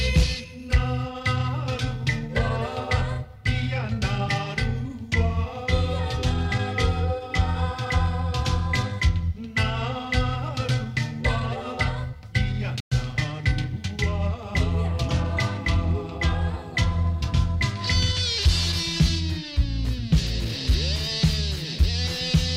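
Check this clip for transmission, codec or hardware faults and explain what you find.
One fault, a Bluetooth dropout, at 12.80 to 12.93 s: packets likely arrived too late for the headphones and were discarded, leaving a 0.13 s hole, after which the audio resumes as if it had kept playing.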